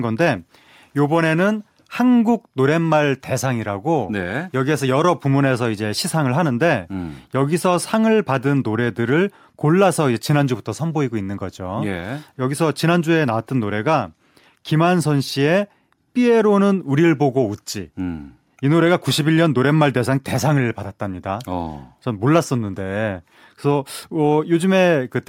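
Nothing goes wrong anywhere in this recording, so there's no fault to point to at any moment.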